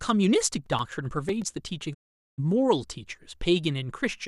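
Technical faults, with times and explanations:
0.41–1.54 s, CD scratch ticks: ten short ticks, about nine per second, each at most around 5 ms. A blemish on the disc corrupts more data than error correction can rebuild, so the player interpolates or mutes a brief patch of samples.
1.93–2.40 s, digital broadcast dropout: the speech fades out over about 20 ms and about 432 ms of audio is missing before it resumes. The receiver muted while frames were lost or failed their checksum, which fits around 18 frames of 24 ms.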